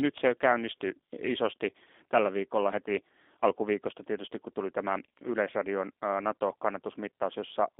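From start to end, the speech carries plainly audible G.729 codec damage. Each 10 ms frame is rebuilt from a vocal tract filter, a pitch predictor and a few pulses. That gives a rough, synthetic edge, which fits roughly 8 kbit/s. The line band runs from 250 Hz to 3.6 kHz.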